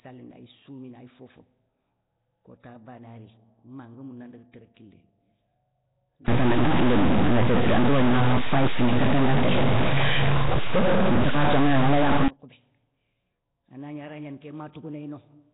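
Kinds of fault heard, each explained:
Nellymoser compression, throughout: heavy damage of the kind likely left by Flash's Nellymoser Asao codec, its fits a 16 kbps stream, starves weak bands and fills them with noise, so the speech carries a rough, hissy halo, sounds smeared and underwater, with nothing above 3.9 kHz.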